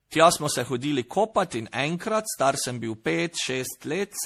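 Throughout this speech recording the sound is swirly, smeared and hollow, with blurred attacks and nothing above about 15.2 kHz. The damage is heavier than a single lossy pass would leave. That points to generation loss, most likely from repeated MP3 encoding at around 64 kbit/s, perhaps seven times over. Each decode and re-encode quantises on a shifted frame grid, so the noise and spectral holes build up from pass to pass.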